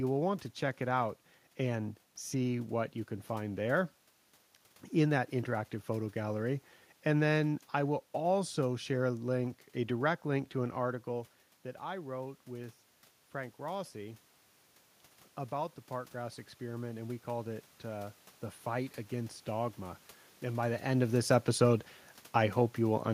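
From 15.54 to 19.43 s, automatic gain rising lifts the level about 4 dB as the gain control compensates for quiet input; room noise swells with the voice, unlike the talker movements near 10.5 and 20.5 s.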